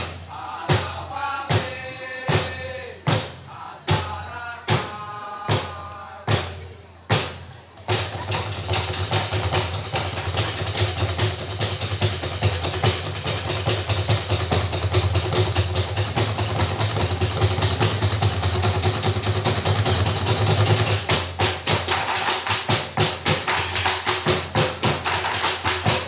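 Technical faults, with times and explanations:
Nothing stood out on listening, with the audio arriving over the WebRTC call path in the narrow telephone band typical of G.711 mu-law, holding nothing above 4 kHz.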